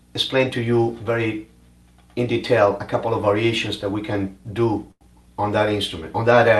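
A short stall from a late packet occurs at 4.91 to 5.03 s. A packet failed to arrive on time, the jitter buffer ran dry, and the receiver held the last sound for about 94 ms until the data caught up, then carried on from the same point. Nothing is lost, but the sound drags unnaturally with a slight buzz or dip, and everything after it plays 94 ms later. The call codec's band limit near 12 kHz is present throughout.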